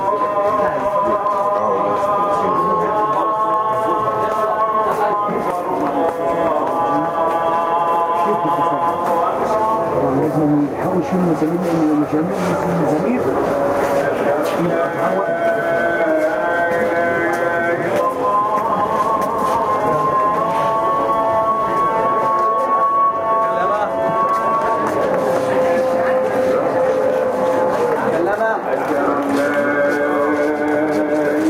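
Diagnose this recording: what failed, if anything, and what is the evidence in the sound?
Gain pumping runs through the whole recording. The swing is roughly 10 dB. Loud and soft passages sit too close in level, and the result sounds squashed and breathing. The likely cause is input gain set far too high, with a fast limiter or compressor in the processing stage clamping down on each peak and releasing between them.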